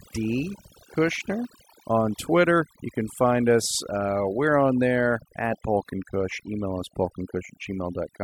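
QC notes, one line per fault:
Throughout: overdone noise removal. A noise reduction process was pushed too hard, switching off individual frequency bands whenever they sit close to its noise estimate. The background drops and breaks up into twinkling specks. Quieter parts of the speech vanish too.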